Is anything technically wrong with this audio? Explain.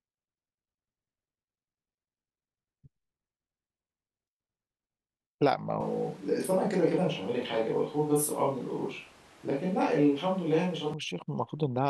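Yes, from 5.80 to 10.94 s the speech goes suddenly roomy and hollow, thinner in the bass, and then snaps back. That's a switch to a distant microphone, likely because the close mic dropped out. The level barely changes, but room noise rises to roughly 30 dB below the speech.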